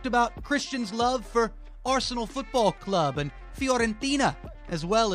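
No technical faults are audible.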